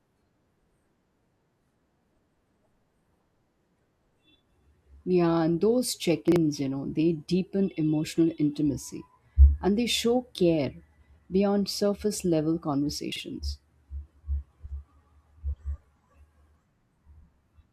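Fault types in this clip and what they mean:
Chunks out of order: a short jumbled blip at 6.28–6.36 s and 13.12–13.20 s. Each time, a 40 ms chunk plays one chunk late, after its neighbour, so nothing is missing but the order is scrambled, leaving three hard joins.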